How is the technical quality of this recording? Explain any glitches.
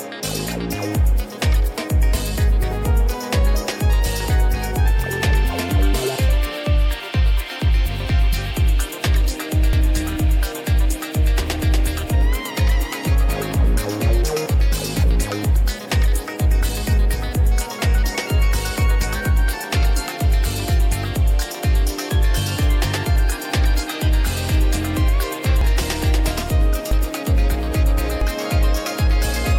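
The recording has five audible skips. Compressed frames are skipped at 9.73, 13.08, 25.61, 26.91 and 28.21 s. Whole blocks of about 92.9 ms never play, so the sound jumps ahead by roughly 0.2 to 0.5 s.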